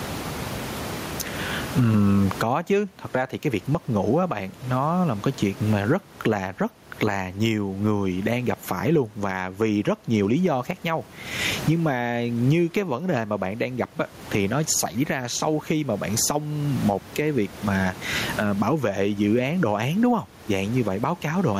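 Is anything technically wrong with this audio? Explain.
Yes. Gain pumping runs through the whole speech clip. The gain swings around 25 dB, with background noise about 30 dB below the voice. This likely comes from gain set far too high, with a fast limiter clamping down.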